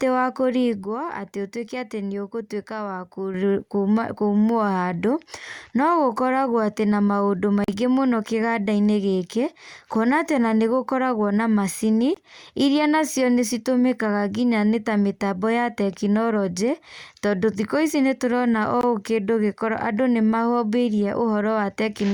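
Speech clip with two kinds of trouble. At 0.84 s the level and the background noise drop together by about 7 dB, then snap back at 3.34 s with no ramp either way. That's a sudden gain jump, likely a digital gain setting applied instantly. Later there are short silences at 7.64 s (about 41 ms, which fits two lost packets) and at 12.14 s and 18.81 s (about 20 ms each, one packet's worth). Each time the speech picks up as if it had kept playing through the gap, so these are likely Bluetooth dropouts.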